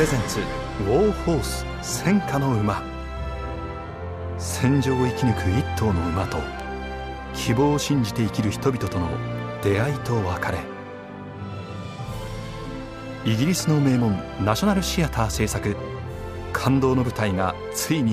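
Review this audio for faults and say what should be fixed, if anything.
Two bit error spikes stand out, at 6.60 s and 8.87 s. Each is a single sharp tick, unrelated to the surrounding sound, peaking around -19 dBFS and -13 dBFS. A flipped bit throws two or three consecutive samples off by a power of two before the value snaps back. On a waveform each shows as a lone vertical needle; on a spectrogram, a thin full-height stripe. Preventing it means error-checked links and memory, such as ECC RAM and checksummed transfers.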